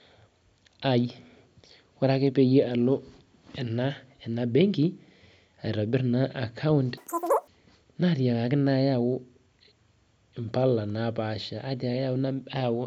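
From 6.97 to 7.47 s the speech jumps into a squeaky, chipmunk-like rush, three times too fast and about 19 semitones higher. This is a wrong sample rate: the audio is played back unconverted at triple its recorded rate, which fits 16 kHz material run at 48 kHz.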